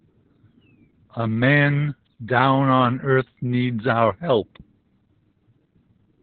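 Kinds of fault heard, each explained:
Opus voice compression: throughout the speech, the band stops near 4 kHz and the excitation is coarsely coded, leaving the sound muffled, hoarse and faintly robotic. This points to the SILK linear-prediction coder in narrowband mode, at a bitrate around 8 kbps.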